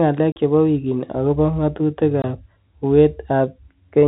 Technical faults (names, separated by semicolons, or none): packet loss filled with silence